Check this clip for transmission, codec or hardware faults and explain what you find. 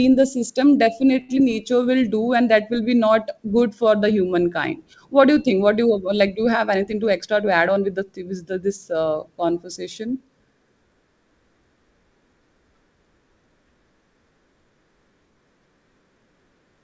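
Three faults stand out in this speech, all from the network side of the call.

Short stall from a late packet, 1.21 to 1.30 s. A packet arrived late and the jitter buffer ran dry. The receiver held the last sound going for about 79 ms, then carried on from where it stopped. Nothing is lost. Instead one sound lingers too long, with a faint buzz or dip. The delay grows by those 79 ms.

Short concealed packet loss, at 1.36 s. Here about 30 ms of audio never reached the decoder. Only a sliver, roughly 4 ms, was synthesised to bridge the gap before blending back into real audio. The rest simply drops out, which also trims the added delay back by around 30 ms. It sounds like a tiny smear or wobble, and a brief consonant may go missing.

Jitter buffer speed-up, 6.75 to 7.88 s. The buffer had built up more audio than it wanted. To shrink it, the receiver cut out many short pitch-period slices in a row. 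About a tenth of a second disappears over this stretch. Pitch stays the same, but the speech runs at about 107% speed. It sounds slightly hurried.

The G.722 call path also leaves nothing above 8 kHz, which fits its 64 kbps mode.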